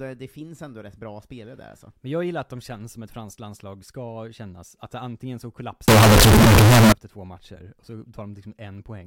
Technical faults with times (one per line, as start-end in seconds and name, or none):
5.88-6.92 float read as integer